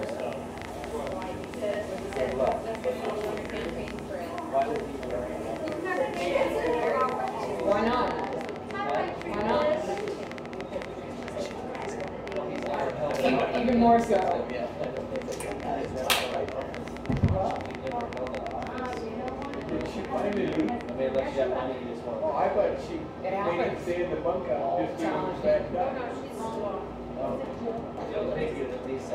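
From 0.03 to 21.2 s, a train of clicks ticks unevenly about 9.6 times per second, likely interference. Their matching shapes distinguish it from random crackle.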